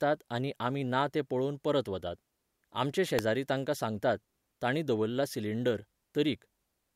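A speech clip with one electrical switching spike at 3.19 s, just before "तांकां सांगतात तांणी दवरला": a single sharp snap peaking around -10 dBFS, likely an arc from a nearby switch picked up by the line. Unlike a dropout click, the speech continues intact underneath rather than breaking.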